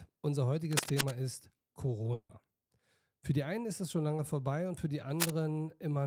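From 0.71 to 1.15 s, a burst of scratching noise sits over the sound, about as loud as the sound itself. This cable scratch noise likely comes from a worn connector or cable being moved, its contact flickering. At 2.13 s a long network dropout begins. The last sound smears into a fading buzz, then briefly goes silent. Audio resumes at 2.31 s with a piece missing, likely from packets that never arrived. A shorter scratch returns from 5.15 to 5.30 s.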